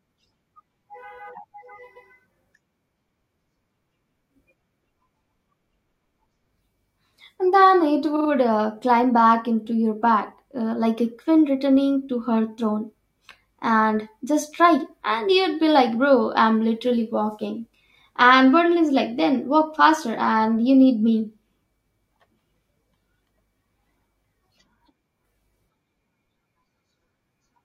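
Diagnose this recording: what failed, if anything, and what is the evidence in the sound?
Repeated frames at the codec or storage stage. At 1.95 to 2.08 s, a 128 ms stretch plays twice. Between "then it" and "uh climb back into", at 8.15 to 8.28 s, a 42.7 ms block loops three extra times as a rapid stutter. Just after "returning to her throne", at 13.31 s, a 2.7 ms sliver repeats once. Each repeat adds time and duplicates the exact content at the join, which rules out dropout or loss concealment.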